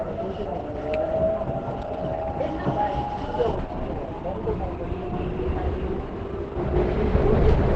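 Opus compression is the likely cause of the damage heard from start to finish. Nothing sounds above about 8.8 kHz, and the sound turns muffled and hoarse, which points to the encoder working at a very low bitrate, around 12 kbps, in its wideband speech mode. That mode models sound as a speech-like signal rather than keeping every band's energy, so these everyday sounds lose their brightness and texture and come out muffled and heavily damaged.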